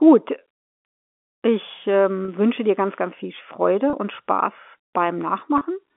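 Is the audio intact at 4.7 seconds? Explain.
Yes, the audio is intact at 4.7 seconds, with the speech carried through the narrow telephone band of G.711 telephone coding and no fault at that moment.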